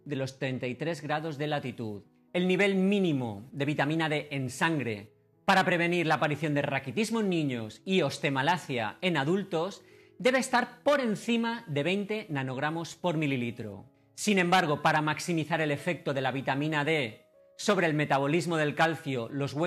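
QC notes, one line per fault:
No faults found.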